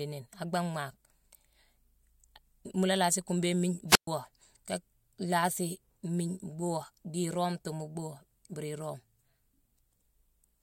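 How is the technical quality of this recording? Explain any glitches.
There is one glitch, a wireless microphone squelch dropout from 3.88 to 4.07 s. The radio signal fades, hiss briefly rises, and then the receiver's squelch mutes the output for 122 ms. This shows as a flat gap in the waveform and a blank vertical band on the spectrogram.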